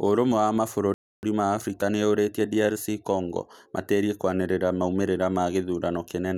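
At 0.94 s the speech cuts to silence for about 290 ms, resuming at 1.23 s, which marks it as a playback stall. The player was likely starved of data or blocked briefly.

From 1.23 s to 4.11 s the player works off that backlog with a time-compressed catch-up, running about 1.1 times fast until just before "kwanĩrĩra maumĩrĩra". Pitch stays natural, unlike a simple speed-up, but small cross-faded cuts make it sound hurried.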